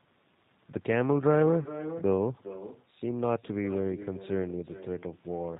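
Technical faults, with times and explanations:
Throughout, echo with no canceller: the far end is playing the call over a loudspeaker, and its microphone is feeding that sound straight back with nothing subtracting it. After the network round trip, about 400 ms, every phrase returns as a second copy at about 14 dB below the original. That copy is quieter and thinner. The delay is long enough that it registers as a distinct repeat trailing each utterance, not as added room tone.
Throughout, G.729 codec: the speech has been squeezed through G.729A at 8 kbit/s. This codec does not carry the waveform itself. It sends a vocal tract filter, a pitch predictor and a sparse set of pulses for each 10 ms frame, and the receiver resynthesises speech from them. Nothing above 4 kHz survives, so the sound is band-limited and muffled at the top. The damage is plainly audible as a rough, slightly synthetic texture.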